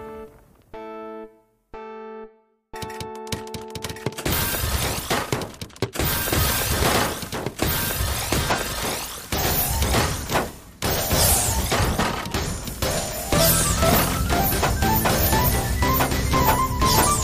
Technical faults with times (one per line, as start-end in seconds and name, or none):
3.50-6.65 resampler restarted on every block